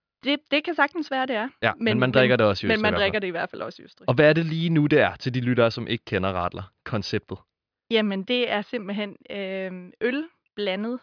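No technical faults turn up anywhere in this speech recording, so there's nothing here to walk through in time order.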